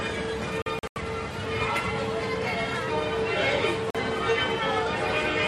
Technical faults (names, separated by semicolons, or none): digital broadcast dropout